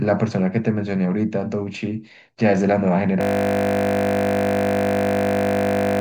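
At 3.21 s the speech freezes into a system hang loop. One 20 ms slice of buffered audio repeats to the end, producing a steady 50 Hz buzz.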